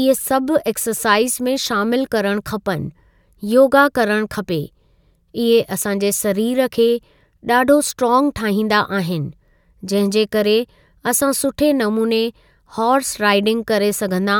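No technical fault can be heard anywhere in this speech recording; the signal stays continuous and stable throughout.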